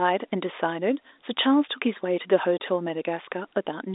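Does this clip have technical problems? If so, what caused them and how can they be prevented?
Yes: there's packet loss filled with silence at about 2.58 s, where a single dropped packet leaves a hole of roughly 20 ms in the telephone-band speech, with abrupt edges where the receiver inserts plain silence. Enabling packet loss concealment or a jitter buffer would prevent it.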